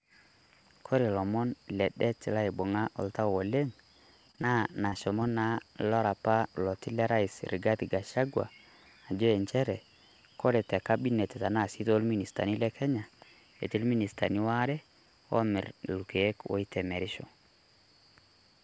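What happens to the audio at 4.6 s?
Repeated packet loss from 4.28 to 5.22 s: nine short gaps, none over 30 ms, patched by stretching prior sound, give choppy, robotic speech before "naa lara opa loti".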